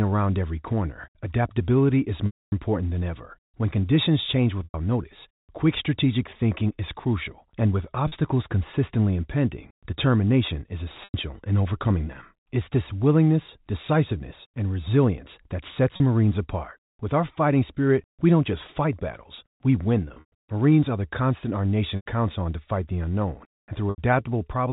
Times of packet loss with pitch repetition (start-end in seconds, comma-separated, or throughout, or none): 2.26-2.52, 4.64-4.74, 8.08-8.12, 11.04-11.14, 15.96-16.00, 20.08-20.32, 21.96-22.06, 23.90-23.98